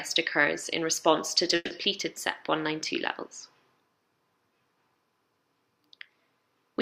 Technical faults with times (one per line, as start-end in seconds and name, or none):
1.55-1.72 call audio freeze